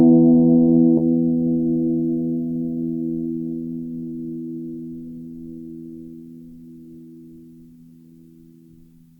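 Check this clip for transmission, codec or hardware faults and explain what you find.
There is one transmission fault in this music clip. It is a skip ahead at about 0.97 to 0.99 s. Roughly 0.4 s of the music is missing there. The later audio was already waiting, so that stretch was discarded instead of played. This is likely a jitter buffer overflowing or packets lost in transit. Playback lurches forward with no silence to fill the gap. The music before and after is butted together. The line jumps abruptly, as though a short piece had been cut out.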